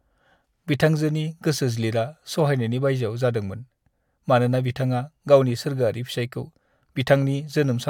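A speech recording, with nothing technically wrong with it.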